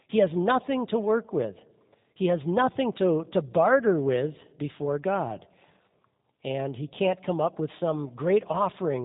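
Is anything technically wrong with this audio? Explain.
Yes. Throughout the speech there is G.729 codec damage, which fits an 8 kbit/s stream. Each short frame is rebuilt from a filter, pitch predictor and sparse pulses, giving rough, synthetic voicing. A spectrogram shows nothing above 3.8 kHz.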